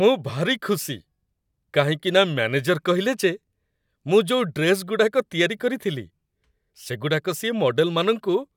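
No faults are audible anywhere in this speech recording.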